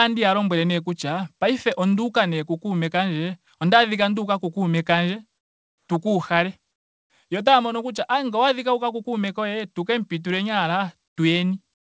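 Comfort noise in place of the background fills the pauses at 5.38–5.88 s (before "tu ka"), 6.72–7.10 s, 11.08–11.16 s (after "kemu pituleni") and 11.74 s to the end, likely from discontinuous transmission. The real room tone drops about 7 to 17 dB into steady, featureless hiss. On a spectrogram these gaps show as smooth, even bands, and on a waveform as a flat, uniform floor. Like the rest of the audio, they stop at 8 kHz, which fits a G.722 call codec.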